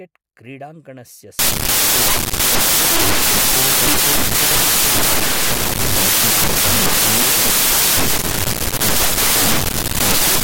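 A byte-level decoding error sets in at 1.39 s and runs to the end of the clip: the samples are built from the wrong bytes, with the reader misaligned by a byte or taking each sample's bytes in the wrong order. The rapidly varying low-order bits end up as the most significant part of every value, so the speech turns into loud, harsh broadband noise.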